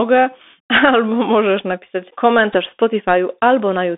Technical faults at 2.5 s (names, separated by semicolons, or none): Bluetooth CVSD headset codec; Bluetooth headset packet repeated